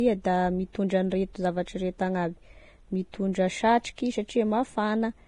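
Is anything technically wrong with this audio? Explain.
Yes. Throughout the speech, the treble sounds hissy and grainy, consonant attacks are blurred, and nothing is present above 10.6 kHz. The likely cause is heavy Vorbis compression at a bitrate near 30 kbps, where the encoder removes the top band and quantises the remaining treble so coarsely that fine detail becomes noise.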